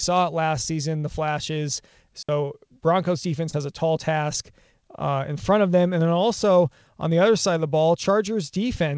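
A digital wireless dropout at 2.23 to 2.29 s, just after "last season the flashes", mutes this speech clip for 60 ms, leaving a clean near-silent hole with no noise burst as the wireless receiver briefly loses its data. Short concealed packet loss at 3.50 to 3.55 s, just before "a tall task uh", leaves a brief smear where about 20 ms missed the decoder and was filled by extending the preceding sound before blending back. Throughout, nothing is heard above 8 kHz, which fits the wideband G.722 call codec the audio passed through.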